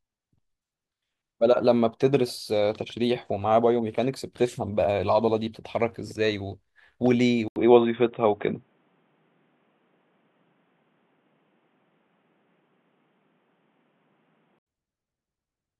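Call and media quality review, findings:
Speech dull 7.48–14.67 s, nothing above 3.8 kHz; 80 ms gap at switch, few-dB level shift, faint new noise floor. Likely input switched to a poorer device.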